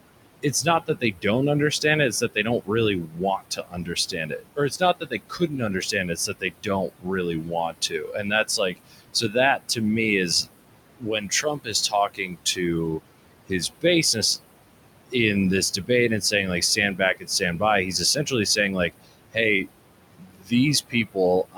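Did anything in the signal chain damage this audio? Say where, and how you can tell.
Yes. The damage comes from the call-processing stage, where a noise suppressor is active for the whole clip. It pulls the room noise, which sits about 12 dB below the speech, down by about 21 dB between phrases. The noise then comes back up under each phrase. These are noise suppressor artifacts: the suppressor decides frame by frame which bands hold steady noise and attenuates them.

The same suppressor also removes parts of the speech. The affected spans are 0.42–1.25 s, 2.11–9.79 s, 10.98–14.17 s, 15.72–15.9 s, 16.21–19.68 s and 20.14 s to the end. In each span, parts of the speech sound swallowed or faint, with drops as deep as about 22 dB. The longest span loses around four seconds of material in total. This is speech cut by the noise suppressor: low-level speech energy resembles the noise estimate, so it is attenuated together with the background.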